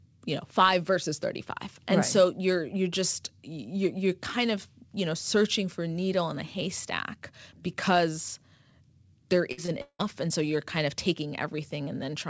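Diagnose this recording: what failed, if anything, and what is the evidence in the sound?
Network stage: a burst of packet loss at 9.52 to 9.60 s drops about 60 ms. The receiver extends the last sound as a fading buzz or hiss, then resumes further on.

Network stage: short concealed packet loss at 9.66 to 9.70 s. About 20 ms is missing and synthesized from the preceding signal, heard as a brief smear before real audio blends back.

Network stage: a long network dropout at 9.82 to 10.01 s, likely a stall in packet delivery, loses about 180 ms. Concealment fills about 175 ms, fading and ending in roughly 70 ms of silence before "and so you're kind", over a G.722 call path with nothing above 8 kHz.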